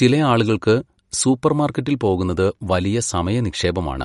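From start to finish the speech carries plainly audible damage, likely from MP3 compression. Nothing sounds above 11.2 kHz. The encoder was short of bits, which fits a rate near 48 kbps. It cut the treble and dropped weak detail, leaving a watery, swirling texture.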